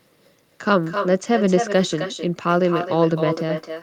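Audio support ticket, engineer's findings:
Quieter, thinner copy of the speech trails every phrase by about a third of a second, throughout. Echo with no canceller: far-end loudspeaker feeds its mic back, at about -8 dB.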